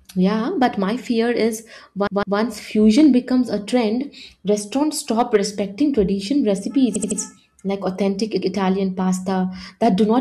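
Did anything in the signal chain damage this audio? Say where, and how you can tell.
Yes. Hard clipping at the converter or sample-format stage flattens peaks at 0.62–0.66 s (before "my fear"), 2.87–3.07 s (before "becomes a"), 5.19–5.36 s and 9.83–10.16 s, overdriven by about 2 dB (about 4 dB at 5.19 s). The waveform shows squared tops, and the spectrogram shows broadband harmonic smear.

Repeated frames from the codec or storage stage cause stutters. At 2.07–2.38 s a 156.7 ms block plays twice more, adding 313.5 ms. At 6.95–7.19 s, before "like authentic", a 78.4 ms block plays three extra times, adding 235.1 ms. On a spectrogram these appear as identical tiled patterns with seams.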